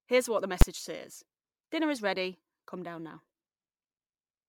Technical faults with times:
0.00-4.49 generation loss
0.61 invalid numbers at full scale

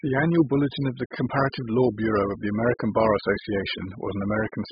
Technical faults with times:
0.00-4.72 AAC compression

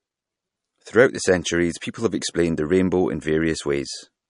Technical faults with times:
0.00-4.30 MP3 compression

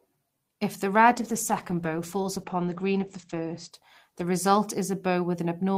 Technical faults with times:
1.09-5.71 call bitrate drop

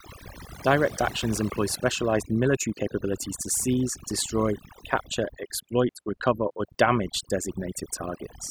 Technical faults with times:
0.00-8.51 overdone noise removal

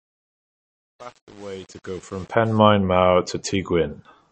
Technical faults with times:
0.00-4.32 MP3 compression
0.00-2.59 truncation distortion on a fade

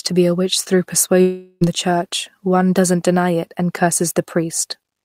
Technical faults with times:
1.21-1.63 long network dropout

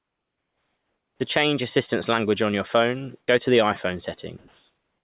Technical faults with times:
0.00-1.20 comfort noise in place of the background
1.17-1.20 onset clipped by the voice detector
3.20-3.28 comfort noise in place of the background
3.26-3.28 onset clipped by the voice detector
4.38-5.04 comfort noise in place of the background

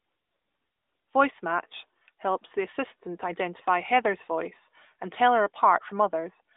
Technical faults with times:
none

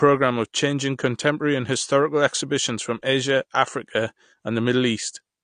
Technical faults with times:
0.00-5.43 AAC compression

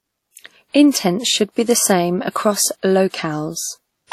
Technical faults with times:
0.00-4.13 WMA compression
2.31-2.35 pre-echo
3.10-3.14 pre-echo

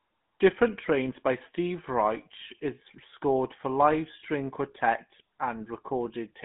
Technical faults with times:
0.00-6.45 GSM full-rate codec

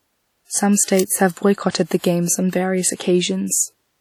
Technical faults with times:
0.00-4.00 WMA compression
0.84-0.88 pre-echo
0.99 electrical switching spike
1.71-1.75 pre-echo

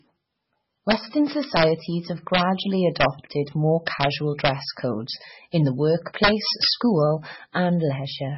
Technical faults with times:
0.00-8.37 MP3 compression
6.24-6.70 integer overflow

